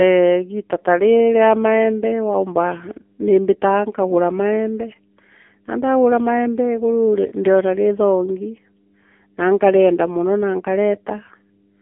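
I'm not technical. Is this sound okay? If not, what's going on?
No. Throughout the clip there's mains hum: a steady low drone at 50 Hz, leaking in from the power supply or a ground loop. Unlike rumble or wind noise, it never changes. It stays one fixed, even tone under the speech.

The speech also carries AMR narrowband mobile codec damage, the squeeze an old mobile phone call applies. Nothing above about 3.5 kHz survives, so it sounds thin and boxed-in. The heavy compression adds a buzzy, synthetic edge. Plain muffling would sound dull but still natural.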